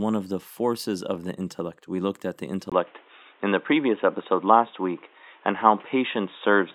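At 2.70 s, after "looked at the", the input likely switched to a poorer device: a brief gap, then dull sound with nothing above 3.8 kHz over a faint new noise floor.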